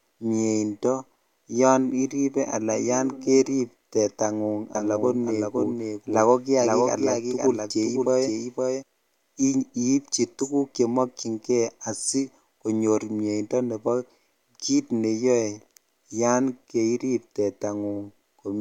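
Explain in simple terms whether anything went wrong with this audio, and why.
From about 4.75 to 8.83 seconds, the speech is heard twice: a second, quieter copy trails the original by about half a second, so everything seems to echo without any sense of a room. The copy switches on and off abruptly at those points. This is a doubled audio track. The likely cause is the same audio being mixed in twice, once directly and once through a slower path that lags behind.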